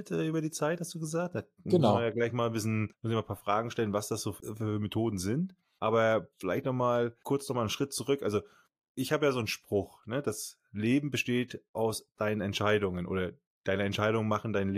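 No technical faults can be heard anywhere in the recording. There is no moment that calls for a time mark or an explanation of a cause.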